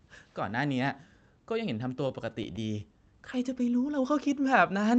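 From 1.95 to 2.83 s the speech shows repeated stalls (stutter). Late packets left the jitter buffer empty eight times, and each gap, none longer than 16 ms, was filled by continuing the preceding sound. That adds about 76 ms, roughly 9% of the stretch, with nothing lost, so the speech briefly drags and judders. The call path's codec band-limits the audio at 8 kHz, which fits Opus at around 40 kbps.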